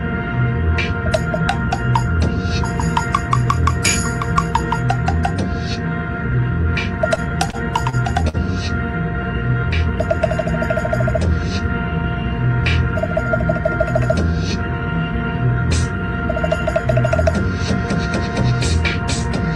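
Late packets emptied the jitter buffer five times from 7.15 to 8.37 s, causing repeated stalls (stutter): sound stretched over gaps up to 51 ms.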